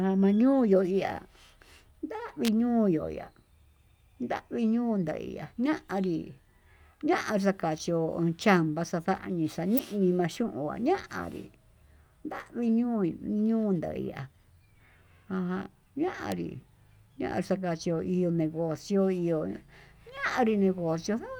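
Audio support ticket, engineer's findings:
Likely electrical switching spike: nearby switch, motor or static discharge arcing, the burst coupled into the audio line and summed onto the speech. Symptom: sharp snaps laid over the signal at 2.45–2.48 s (about 30 ms, peak near -10 dBFS), 9.78 s and 16.32 s (each near -15 dBFS). Component: interference pickup on cabling or input stage, not the speech path itself.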